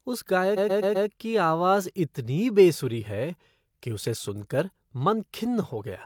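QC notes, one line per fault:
0.53–1.05 s, repeated frames: the speech stutters as one 128 ms block plays four extra times in a row, adding 512 ms to the clip before normal playback resumes. A run of compressed frames reached the decoder more than once, so it decoded and output the same stretch again on each pass. A block this long points to roughly three codec frames being duplicated. Every restart jumps back to the same point, which produces the looping stutter.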